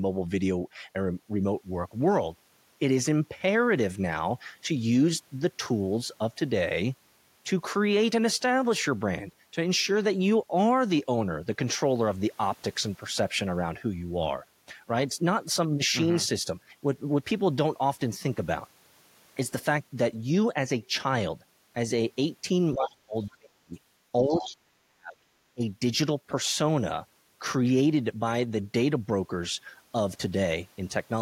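From 22.74 to 23.74 s, speech suppressed in double talk cuts the talker by roughly 40 dB for around 0.7 s, likely an echo canceller ducking during overlap. At 23.23 to 23.35 s the other side's voice leaks through faintly, about 35 dB down, likely residual loudspeaker echo. At 24.28 to 24.53 s the leakage is louder, about 15 dB below the speech. Meanwhile, from 24.28 to 25.19 s, suppression returns, about 40 dB deep over roughly a second. A brief dip of about 20 dB follows from 25.54 to 25.63 s.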